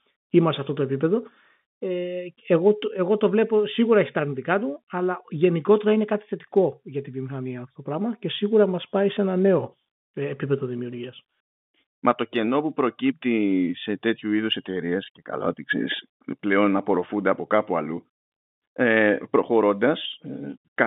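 No technical faults occur at any point in the clip, so there are none to describe in time order.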